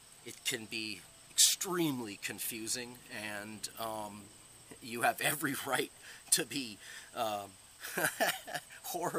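No technical faults can be heard anywhere here.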